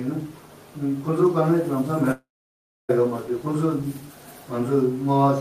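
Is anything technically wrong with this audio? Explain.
Yes. From 2.11 s to 2.91 s there is a long network dropout. The last sound continues as a fading buzz for roughly a tenth of a second, then about 0.64 s of silence follows before the audio resumes. The cause is likely a break in packet delivery, with the receiver stretching the final fragment before giving up. Unlike a brief packet-loss glitch, this gap is long enough to decay into silence, and about 0.78 s of material is skipped rather than delayed.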